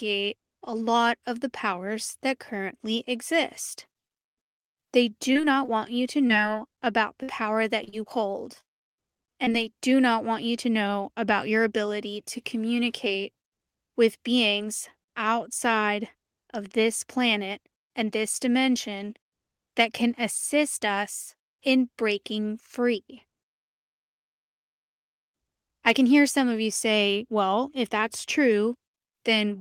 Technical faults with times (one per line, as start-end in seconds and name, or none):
5.33-7.94 repeated packet loss (robotic sound)
8.60-9.52 repeated packet loss (robotic sound)